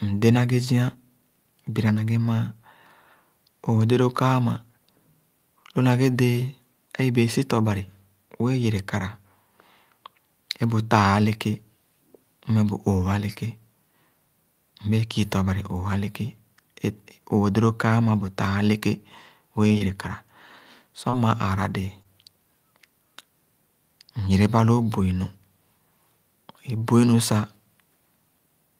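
At 19.67 to 19.72 s, a short stall from a late packet: the jitter buffer ran empty, and the receiver held the last sound for about 28 ms, briefly stretching the speech. Then short concealed packet loss at 19.72, 19.78, 21.10 and 22.03 s: each time about 20 ms never reached the decoder and was filled by extrapolation, heard as a quick smear or wobble.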